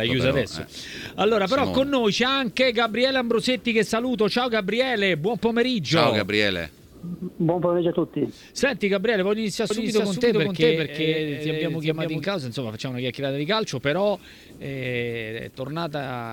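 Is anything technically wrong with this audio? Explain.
Yes. From 9.70 s to 12.24 s there is a doubled audio track: the sound is heard twice, with a second, full-range copy trailing the first by roughly 400 ms and about as loud. The copy has no fading tail or room colour, and it cuts in and out abruptly at those times. The likely cause is the same signal arriving a second time over a slower path, or an edit holding two copies out of step.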